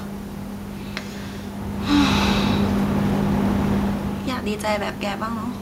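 Nothing stood out on listening to this speech; the background noise of the room and the changes in loudness around 1.5 s and 4 s, as the talker shifts position relative to the microphone, belong to the recording itself.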